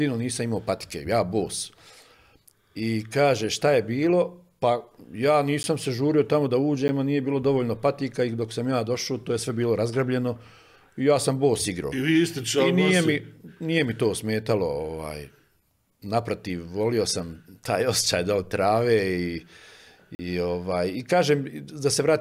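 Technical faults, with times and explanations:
5.63 s and 6.88 s, block of digital silence: twice, the output buffer likely went briefly unfilled, so about 10 ms of samples was zeroed. The level falls straight to nothing and snaps back with no fade, and the two sharp edges sit so close together that each gap is heard as a single tick rather than a hole.
20.15 to 20.19 s, block of digital silence: a longer 40 ms run of zeros, with the same abrupt edges. This one is long enough to register as a short dropout.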